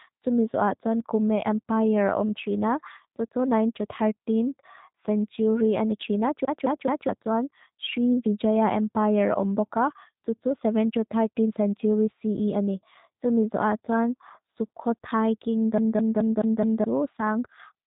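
Speech runs through a G.729 codec across the whole clip, with plainly audible damage: nothing above 3.8 kHz, and a rough, slightly synthetic buzz, consistent with about 8 kbit/s. That pulse-built buzz sets it apart from simple telephone band-limiting, which dulls sound without roughening it.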